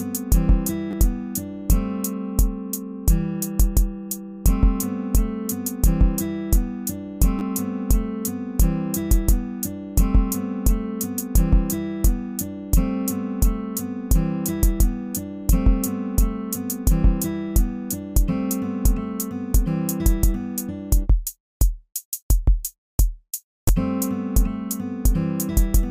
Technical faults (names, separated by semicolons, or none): repeated buffer